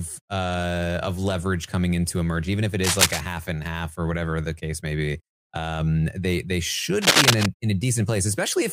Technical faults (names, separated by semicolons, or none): cable scratch noise